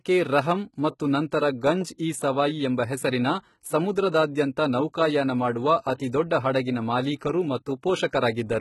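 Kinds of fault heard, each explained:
HE-AAC compression: The speech has nothing above about 11.8 kHz, and the top end sounds synthetic and gritty, which fits heavy damage from a very low bitrate around 16 kbps. This is likely HE-AAC, which rebuilds the treble by copying lower bands upward rather than coding it.
Pre-echo: A short hiss leads a sharp onset, because the codec's noise spreads across the whole block including the quiet bit before the attack. It's a short 10 ms smear at 1.31 s, and a longer 44 ms one from 5.95 to 6.0 s.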